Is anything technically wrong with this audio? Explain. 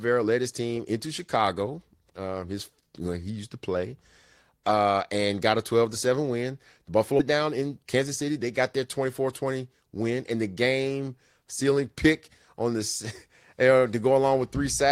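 Yes. At 7.19 s a skip ahead occurs: about a second of audio was discarded while later audio waited, so the speech jumps forward with no gap. From 7.33 to 9.45 s, jitter buffer speed-up trims short pitch-period slices, about a fifth of a second in total, so speech runs 108% fast at unchanged pitch and sounds hurried, just before "win and the game".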